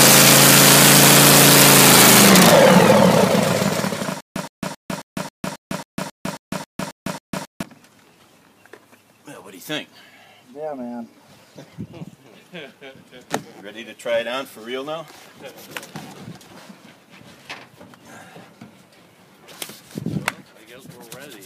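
From 4.21 s to 7.63 s there is a stutter with silent gaps. A 117 ms fragment repeats 12 times, each followed by about 153 ms of silence, every 271 ms. The stream likely stalled and replayed its last fragment. The sound meant for that span is lost.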